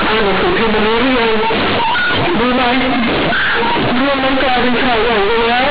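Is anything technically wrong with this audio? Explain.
Yes. Companded audio read as linear runs through the whole clip: A-law bytes are played as plain 8-bit samples with no expansion, so every sign change throws the output across half its range. The speech becomes loud, buzzy distortion, with heavy noise filling the pauses. The G.711 telephone coding underneath, sampled at 8 kHz, behaves as expected, so nothing above 4 kHz is present.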